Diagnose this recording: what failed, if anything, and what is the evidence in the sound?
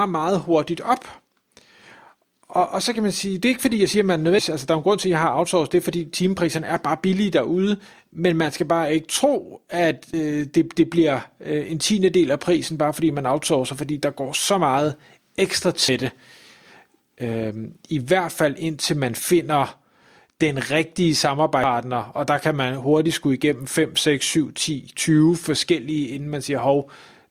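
Audio missing between chunks, likely from a recorder writing 6.0 s chunks: at 10.14 s, between "bare ikke tro at" and "det det bliver øh", and at 21.64 s, after "den rigtige" before "og der kan man", roughly a third of a second vanishes. Waveform and spectrogram show abrupt seamless joins, with no silent gap.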